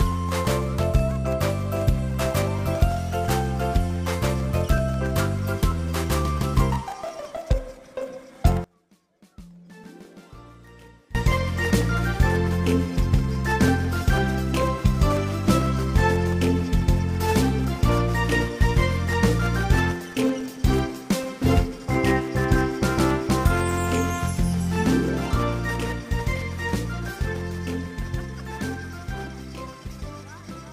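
From 8.64 to 11.15 s, one channel is inverted, likely a polarity flip on one stereo leg, so everything common to both sides cancels when they combine to mono. The level drops by about 25 dB, leaving only a faint residue of the difference between channels.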